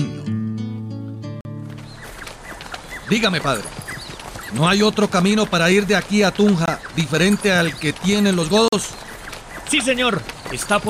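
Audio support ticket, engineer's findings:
Blocks of digital silence: hard dropouts at 1.41–1.45 s and 8.68–8.73 s (about 43 ms each) and 6.66–6.68 s (about 21 ms). Sizes fit 2048- and 1024-sample buffers, so the output buffer was probably not filled in time.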